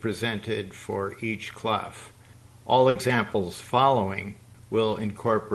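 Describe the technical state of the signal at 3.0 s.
Just before 3.0 s, from 2.89 to 2.98 s, a burst of packet loss left the receiver without 60 ms of audio. It covered the gap by prolonging the last sound and fading it down, then resumed with that 60 ms skipped, so the sound jumps forward.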